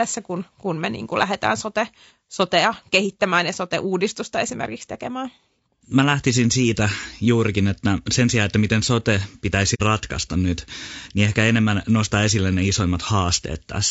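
Throughout the speech, a rough, grainy texture with noise between harmonics and a thin top band is likely low-delay AAC compression, consistent with AAC-ELD near 32 kbps. From 9.74 to 9.81 s, between "sijaan että miten sote" and "ratkaista nyt niin ehkä", AAC frame loss with muting fades the sound to a soft-edged gap, fitting two zeroed frames.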